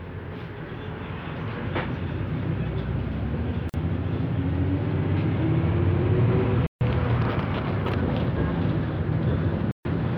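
At 3.69 s, 6.67 s and 9.71 s the sound cuts to dead silence for about 45, 145 and 140 ms, clean gaps without stutter or noise, which points to a likely Bluetooth stall, the headphone buffer running dry.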